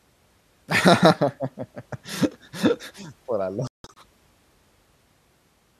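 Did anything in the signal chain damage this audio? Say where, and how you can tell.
Yes, the digital broadcast reception stage suffered a dropout. Between 3.67 and 3.97 s the receiver muted on failed frames, leaving several short holes totalling 216 ms, the longest 168 ms, consistent with around nine lost frames. The speech sent during those gaps is gone.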